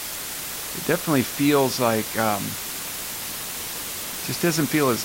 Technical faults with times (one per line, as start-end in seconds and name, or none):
0.00-5.05 low bit depth with dither